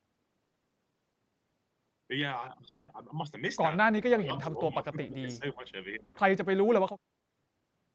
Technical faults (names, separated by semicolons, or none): short concealed packet loss; long network dropout; speech suppressed in double talk; echo leak